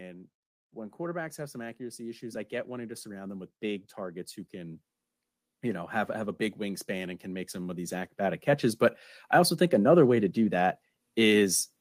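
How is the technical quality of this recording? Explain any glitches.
The recording has one recurring glitch: automatic gain rising, heard three times. From 0.71 to 4.84 s the level climbs by about 8 dB; after "have have a big" it rises by about 4 dB from 6.57 to 8.75 s; after "I also" it rises by about 3 dB from 9.69 to 11.63 s. Each time, the gain control judged the input too quiet and raised its gain step by step, so speech and background swell together.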